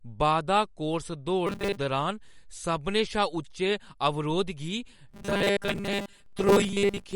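Throughout the speech, MP3 compression is plainly audible, and the watery smearing suggests a low bitrate, likely near 50 kbps. A spectrogram would show a hard ceiling and flickering gaps. From 1.47 to 1.77 s, just after "बाधा कोर्स", and again from 5.09 s to the end, robotic sound from repeated short buffers takes over. Most of the audio is replaced by looping 5 ms slices, likely from late-arriving buffers, producing a rigid 200 Hz buzz. This would look like identical repeating waveform cycles and evenly spaced harmonic stripes.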